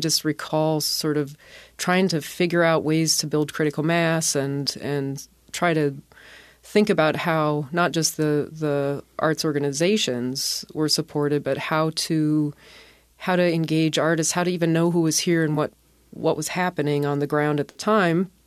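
At 0.47 to 0.51 s, just before "sort of trying to", a corrupt frame decoded: damaged bits in roughly one compressed frame were played as if valid, putting misplaced spectral energy into a short burst peaking around -25 dBFS.

Two corrupt frames concealed follow, at 15.54 to 15.57 s, between "who was here and" and "what what was happening", and at 17.71 to 17.81 s, after "was happening on the". The decoder caught the errors and covered them rather than playing them out as squeaks, over one and about three frames respectively.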